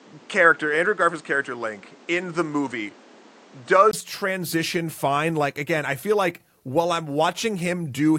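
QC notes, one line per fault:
0.00–3.93 s, input switched to a poorer device: the speech is dull and boxy, with nothing above 8.8 kHz, a noise floor of its own roughly 30 dB under the speech, and a level a few dB different. At 3.93 s a brief silence of about 20 ms is followed by fuller, clearer sound. The likely cause is capture through a lesser microphone or headset profile that passes a narrower band, then a change back to the normal input.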